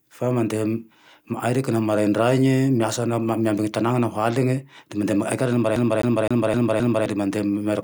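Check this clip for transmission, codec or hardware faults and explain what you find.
A CD stuck on one turn, from 5.76 to 7.06 s: a scratch throws the laser back each rotation, so the same 260 ms of speech repeats five times, each jump clipped by a brief mute.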